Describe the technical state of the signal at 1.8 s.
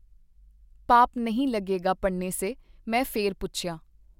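At 1.8 s the speech signal is intact, with no audible fault at that point.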